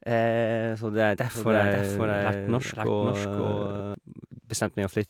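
Speech runs with a doubled audio track from 1.34 s to 3.94 s: a somewhat quieter copy, about 5 dB down, trails about half a second behind, dry and full-band, cutting in and out abruptly. The likely cause is a second, slower capture path mixed in.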